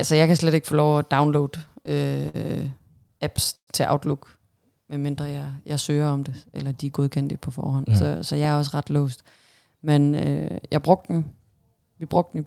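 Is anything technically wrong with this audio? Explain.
Yes. Repeated stalls (stutter) occur from 1.57 to 2.36 s, just after "få lov at downloade", and again from 2.72 to 3.69 s. Audio arrived more slowly than it was played, so the jitter buffer kept running dry and the receiver stretched the last sound to fill each wait. That makes seven gaps totalling 127 ms, then nine totalling 205 ms, the longest 121 ms. Nothing is lost, but the speech drags and stutters.

A jitter buffer speed-up runs from 6.10 to 6.92 s, between "medmindre jeg jeg søger" and "på forhånd". Too much audio had built up in the buffer, so the receiver cut out many short pitch-period pieces, roughly a tenth of a second in all. The speech plays about 10% faster at unchanged pitch and sounds hurried.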